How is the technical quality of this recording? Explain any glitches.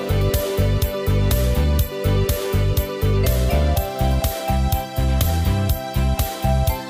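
Nothing here to worry about: there are no glitches to explain, and the recording holds together nicely all the way through.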